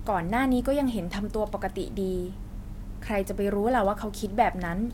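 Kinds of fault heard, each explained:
No technical faults heard.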